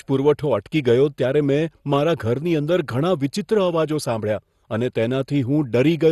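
Throughout the speech, nothing sounds above 12.2 kHz, and the top end is dull. A gurgling, granular roughness sits on the sound. This is likely MP2 compression. Too few bits switch off upper sub-bands and coarsely quantise the rest, which fits a rate near 64 kbps.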